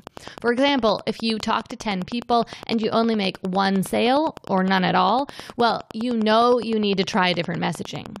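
Throughout the speech, Wi-Fi interference produces a steady ticking spaced 102.4 ms apart, close to ten clicks a second, around 20 dB below the voice. The audio circuit is picking up a nearby Wi-Fi radio's beacon pulses and rectifying each into a click.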